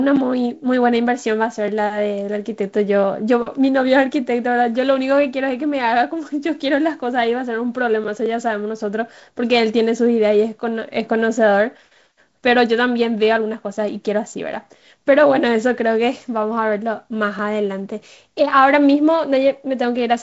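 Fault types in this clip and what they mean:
There are no fault types in this speech clip; the G.722 wideband telephone coding at 48 kbit/s is working as expected, with nothing above 7.7 kHz.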